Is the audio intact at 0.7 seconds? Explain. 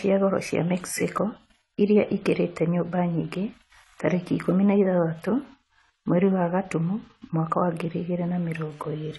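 No. At 0.7 seconds, as across the whole clip, the speech has likely been through AAC compression at a low bitrate, consistent with roughly 32 kbps AAC-LC. With so few bits, the encoder discards content it judges least audible, dropping everything above 11.5 kHz and coarsely quantising what remains. The result is plainly audible damage: the speech sounds dull and smeared, with a warbling, fizzy texture on sibilants and sustained sounds.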